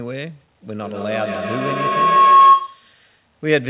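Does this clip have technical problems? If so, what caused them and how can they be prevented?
Yes. A feedback howl runs from 0.81 to 3.0 s. Two devices in one room share the call, so each loop through loudspeaker and microphone gains level. It narrows to a tone near 1 kHz, pulses roughly every 150 ms, and peaks about 13 dB above the speech. Mute one device or use headphones to prevent it.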